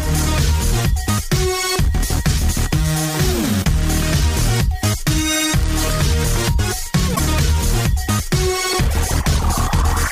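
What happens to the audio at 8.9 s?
Nothing goes wrong at 8.9 s; the audio plays through that moment intact, with no dropout, click or other technical fault.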